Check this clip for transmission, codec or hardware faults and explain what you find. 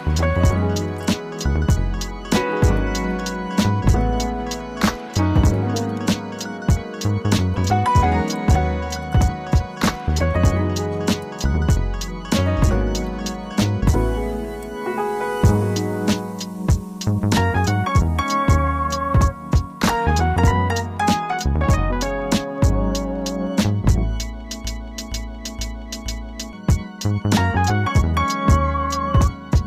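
One fault stands out: a broken-record loop from 24.65 s to 26.53 s. A fragment of about 471 ms plays four times back to back, each pass identical, and whatever should have sounded in those two seconds never arrives. The likely cause is a stalled player, encoder or stream that kept resending its last held chunk. Unlike a stutter or echo, the repeats are exact copies with no decay and no gap between them.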